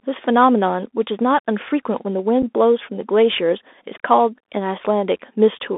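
This is a speech clip coming through a Bluetooth CVSD headset codec the whole way, so it's squeezed into roughly 250 Hz to 3.6 kHz, which fits a 64 kbps CVSD link. The codec damage is plainly audible: s sounds go scratchy, there's a grainy hiss under the speech, and loud high-frequency bits distort as the step size can't keep up. At 2.42 s there's one spot of unconcealed Bluetooth headset packet loss, a gap of about 7.5 ms, roughly a single packet, dropped and replaced with nothing. You hear it as a brief hard-edged hole, with the speech coming back quieter for a moment.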